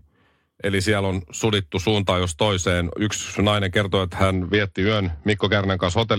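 From about 4.33 s to the end, the speech hits a Bluetooth SBC bit pool drop. The link squeezed the bit budget, so the upper sub-bands starve and the rest gets coarsely quantised. The treble goes dull and gritty, which fits a fall to a very low bit pool, roughly 72 kbps.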